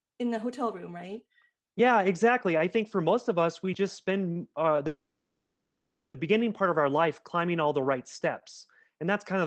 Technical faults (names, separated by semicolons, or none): call audio freeze